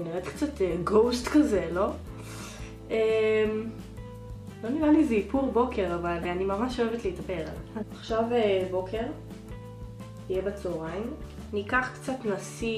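At 6.22 to 6.25 s, damaged data in a compressed stream produces a brief glitch lasting about 30 ms. Corrupted bytes make the decoder misread a frame and hunt for the next header.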